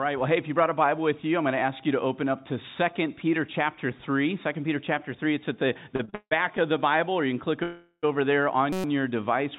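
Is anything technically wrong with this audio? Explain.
Yes, there are three distinct faults, all in the last few seconds. The audio comes through a narrowband call path, with nothing above 4 kHz, which fits a G.711-type codec.

From 5.96 to 6.60 s there are repeated stalls (stutter). Packets kept arriving late, so the jitter buffer ran dry five times. The receiver stretched the last sound to cover each gap, about 258 ms in total with the longest 162 ms, so roughly 40% of that stretch is filler and it drags and hiccups.

From 7.63 to 8.05 s there's a call audio freeze, most likely from packets held up in transit until the jitter buffer emptied. The last sound is continued as a fading buzz or hiss for about 395 ms, ending in around 40 ms of silence. It then resumes where it stopped, so nothing is lost, just delayed.

From 8.73 to 8.84 s there's a system hang loop. The machine or driver stalled while the hardware kept replaying the same 5.33 ms slice, which fits a 256-sample buffer. 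It repeats 22 times, so you hear a brief steady buzz at about 188 Hz rather than the actual sound.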